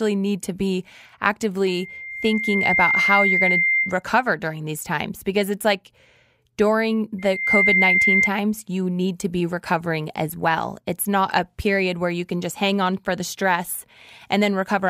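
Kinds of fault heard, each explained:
Loudspeaker feedback squeal: twice, a 2.1 kHz tone swells until it sits a little above the speech, because the microphone picks up its own loudspeaker and the loop runs away.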